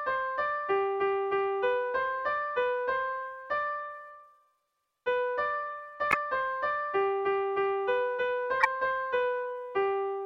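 At 6.11 and again at 8.60 s you get a corrupt frame decoded, a short, fairly loud squeaky burst where damaged compressed frames were played anyway, smearing energy across wrong frequencies.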